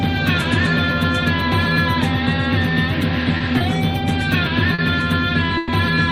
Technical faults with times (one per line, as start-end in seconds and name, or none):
3.37-3.63 short stall from a late packet
4.74-4.81 short stall from a late packet
5.58-5.72 call audio freeze